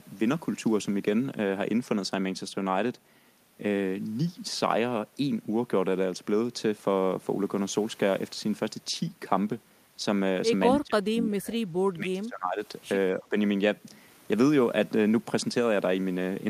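The speech ducks at 10.72–11.59 s (about 30 dB deep), 11.93–12.62 s (about 20 dB) and briefly 13.14–13.36 s, likely speech suppressed in double talk by an echo canceller.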